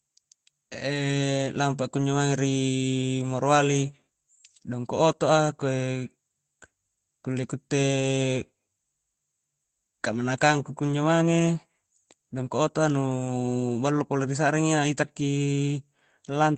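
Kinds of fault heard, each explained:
No faults can be heard in this speech recording. The call path it went through shows up as high frequencies that stop at about 8 kHz, along with the usual coding texture of an Opus-style call codec.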